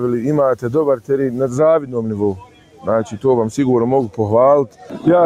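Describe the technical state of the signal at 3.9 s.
At 3.9 s the sound pumps and thins, with sustained parts and tails sinking by roughly 10 dB while attacks pass. This is a noise suppressor applied to music or sounds, active throughout the clip, treating steady content as noise.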